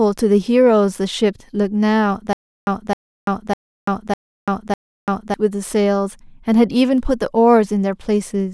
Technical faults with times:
2.33-5.34 stutter with silent gaps

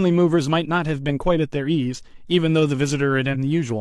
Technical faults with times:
3.30-3.36 compressed frames skipped

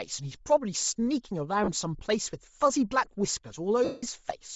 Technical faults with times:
0.00-4.55 Bluetooth LC3 compression
1.64-1.69 lost LE Audio frames
3.84-4.03 lost LE Audio frames

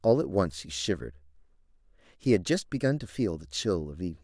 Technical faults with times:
none

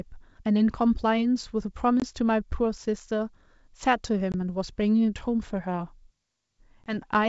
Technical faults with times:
2.00-2.02 packet loss on an ADPCM call
4.32-4.34 packet loss on an ADPCM call
6.84-6.98 packet loss on an ADPCM call

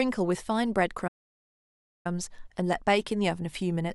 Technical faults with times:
1.07-2.06 playback stall

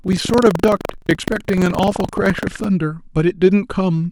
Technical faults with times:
0.00-2.65 buffer tearing

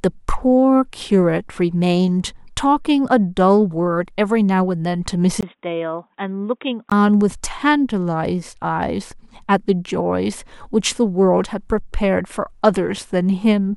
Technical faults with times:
5.41-6.92 input switched to a poorer device

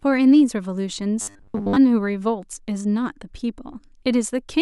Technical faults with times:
1.21-1.76 robotic sound from repeated short buffers

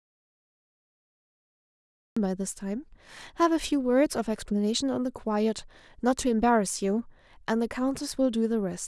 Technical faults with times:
0.00-2.17 audio dropout to silence

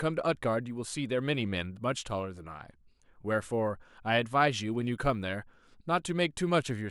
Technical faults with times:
0.32-6.90 resampler restarted on every block

